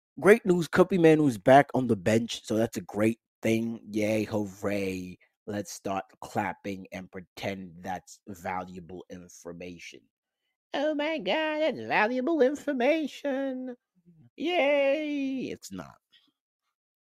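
Around 13.98 s, running to 14.39 s, there's sound cut by the noise suppressor. The suppressor misread part of the audio as background noise and pulled it down harder than everything around it, by about 15 dB at its deepest. Roughly a third of a second is affected in all, so you hear the level sag and whatever was sustaining or tailing off there gets clipped short rather than ringing out.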